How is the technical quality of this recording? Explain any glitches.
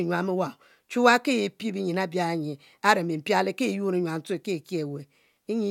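No glitches or technical faults can be heard anywhere.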